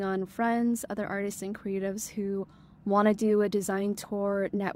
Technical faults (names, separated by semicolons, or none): none